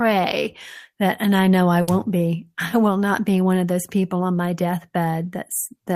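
Speech, with a burst of packet loss at 1.81 to 1.89 s: lost packets leave 60 ms of faded, held concealment, then 60 ms of speech skipped.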